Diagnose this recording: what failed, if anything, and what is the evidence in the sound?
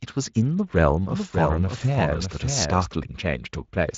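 A second, late copy of the speech was mixed into the path between 1.10 and 2.94 s, likely a duplicate capture route or a misaligned edit. This is a doubled audio track: a full-band copy about 5 dB quieter trails by roughly 0.7 s, dry, starting and stopping abruptly.

At the network stage, a short gap from 1.77 to 1.81 s fits a single lost 20 ms frame. This is VoIP packet loss concealed by the speech codec: the decoder extrapolated the speech into a brief, fading sound, and the lightly coloured Speex speech around it stays weakened briefly afterwards.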